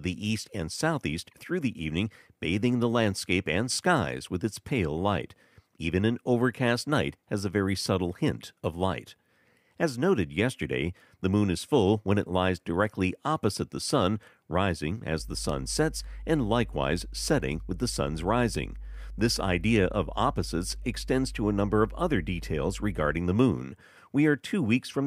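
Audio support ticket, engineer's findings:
Mains hum 15.2–23.2 s, after "opposite the sun rising", gone by "the moon". Steady 50 Hz tone, fairly loud. Ground loop or nearby transformer coupling power line.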